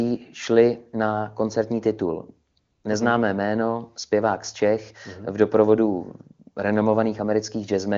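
Comfort noise replaces the background twice: 2.51 to 2.55 s, then 2.59 to 2.83 s, as speech frames stop and synthetic, steady noise fills each gap before real sound resumes.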